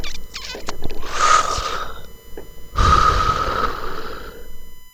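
From start to end, a USB whine sits under the sound. It is a steady, fixed-pitch tone built on 1 kHz, strongest at its 12 kHz multiple. Current drawn in 1 ms bus frames is leaking in through power or ground. It lies roughly 30 dB below the sound.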